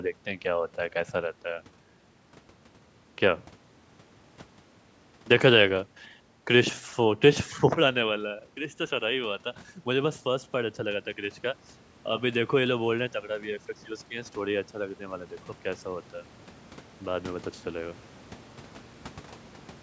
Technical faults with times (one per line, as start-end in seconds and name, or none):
14.10-16.15 automatic gain rising